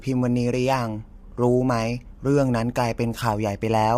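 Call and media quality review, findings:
Low-delay AAC compression throughout, likely AAC-ELD at a bitrate that sounds near 32 kbps. Short frames resolve pitch harmonics poorly and starve bits. Speech rough and grainy, noise filling gaps between harmonics, top band dulled or synthetic. Plainly audible.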